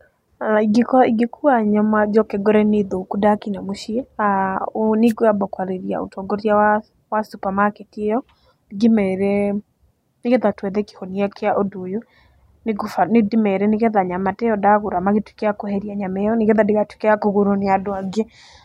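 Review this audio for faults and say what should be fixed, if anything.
There's one thing to fix: a wireless microphone noise hit at about 5.07 to 5.13 s, just before "kwamba kwarĩria ũtongoria wa". You hear a quick burst of static, around 60 ms long, sitting on top of the speech. That's the FM radio link fading briefly as reflected signals cancel the direct one, so the receiver's own hiss comes up before the signal recovers. To prevent it, use diversity receivers and keep the antennas in clear line of sight of the transmitter.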